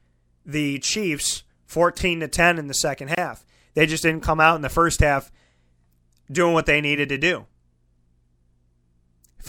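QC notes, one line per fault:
3.15–3.17 s, gap at a join of encoded pieces: just after "in the second", the speech drops out for about 26 ms, then resumes where it stopped. The pieces were encoded apart and butted together untrimmed. Encoder start delay and last-frame padding leave this silence, its edges smeared.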